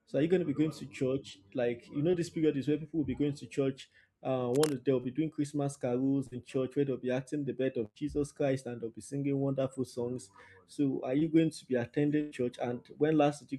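Short concealed packet loss occurs in this speech recording at 2.11 s (between "you know" and "this period is where"), 5.01 s, 6.27 s and 11.19 s (just before "going to be"). Each time, 20 to 40 ms of the call failed to reach the decoder in time. The receiver bridged the hole by extending the preceding sound before rejoining the real signal, which leaves a quick smear or wobble where a small piece of speech is lost. Cable scratch noise runs from 4.54 to 4.74 s as a dense, ragged rustle nearly as loud as the speech itself. The likely cause is a worn cable, connector or control being moved, so that its contact resistance jumps rapidly and injects uneven noise bursts. A burst of packet loss hits at 7.85 s, right after "be acting the birth", and again at 12.21 s. Both times about 100 ms of audio went missing. The concealment carried the last sound forward and let it fade, so a voiced sound turns into a brief held buzz and anything else into a dying hiss. 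Speech then picks up further on, with the intervening tenth of a second gone.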